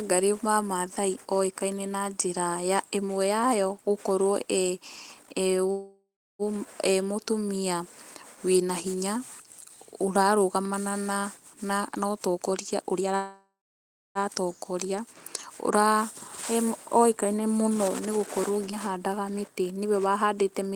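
At 5.71 s the speech stops and is replaced by a call audio freeze lasting to 6.42 s. The last sound is carried on as a decaying buzz or hiss, and the final 0.34 s of that stretch is silent. When speech resumes it picks up exactly where it left off, so nothing is lost, but the delay has grown by about 0.68 s. The likely cause is delayed packets draining the jitter buffer.

From 11.65 s to 13.14 s a jitter buffer speed-up plays the speech at 119% speed with the pitch unchanged. The receiver trims pitch-period-sized slices to shed excess buffered delay, roughly 0.3 s in total, and the speech sounds noticeably hurried.

Immediately afterwards a second freeze runs from 13.16 s to 14.18 s. It has the same fading fill, with 0.65 s of silence, and it adds about 1.0 s of delay with no audio lost.

At 18.71 to 18.75 s a skip ahead drops roughly 0.4 s of speech. The audio on either side of the jump is joined with only a 10 ms fill, so playback lurches forward and that piece of speech is simply gone.

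Finally, from 19.29 s to 19.85 s a milder jitter buffer speed-up runs at 109% and removes around 50 ms. The result is a slight rush that is less obvious than the earlier one.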